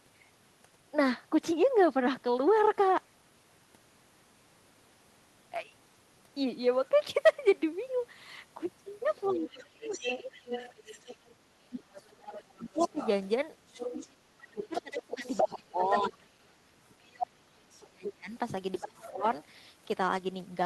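A speech recording in which the echo canceller, likely running on a device playing the far end over a loudspeaker, fails to clear that playback from the microphone, so the other side's voice leaking through is audible from 9.23 to 11.35 s and again from 12.29 to 19.1 s, sitting roughly 10 dB under the main talker. When both sides talk at once, the same canceller likely cannot tell the near talker from the echo and turns everything down. This is speech suppressed in double talk, at 9.3 to 10.31 s, 11.69 to 13.0 s, 14.24 to 16.22 s and 17.89 to 19.24 s, where the talker's voice dips by roughly 20 to 30 dB.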